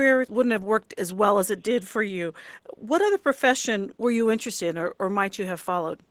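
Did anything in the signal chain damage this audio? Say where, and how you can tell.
Yes, at the codec stage, throughout the speech: this is Opus voice compression. The voice sounds hoarse and faintly robotic because the linear-prediction core codes its excitation coarsely, while the band above 8 kHz is still present. That points to hybrid mode at roughly 16 kbps with 20 ms frames. Unlike packet loss, the damage is steady, with no dropouts or repeated fragments. Unlike a plain low-pass, the roughness lies in the voice itself.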